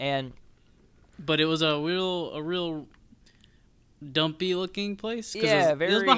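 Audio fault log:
No faults found: the speech signal stays intact and continuous, with nothing to log.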